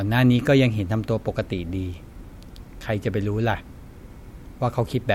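A speech recording, and there is nothing technically wrong with it.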